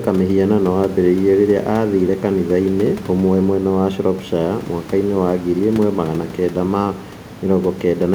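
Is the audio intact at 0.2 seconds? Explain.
Yes, the audio is intact at 0.2 seconds, with only the room's own background noise sitting about 20 dB below the speech.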